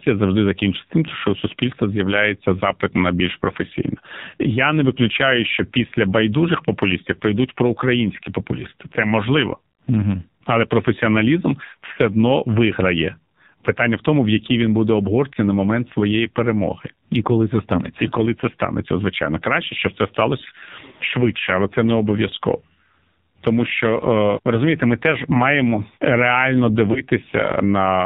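The whole clip runs through the AMR narrowband mobile codec: everything above 4 kHz is gone, and the heavy buzzy, synthetic edge points to a very low mode, around 5.9 kbps. Then at 26.92 to 27.01 s there's a lost AMR speech frame, sounding like a single 20 ms drop. The decoder papers over it with a brief dip or warble before the speech recovers, weak or rough for a moment.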